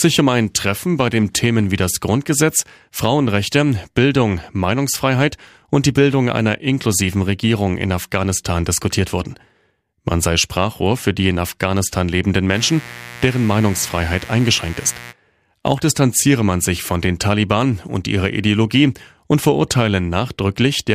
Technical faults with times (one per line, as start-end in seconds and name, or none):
12.51-15.14 mains buzz